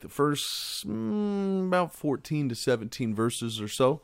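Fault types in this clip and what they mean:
Nothing to list here: listening to this speech recording, no dropouts, glitches or other technical faults turn up anywhere.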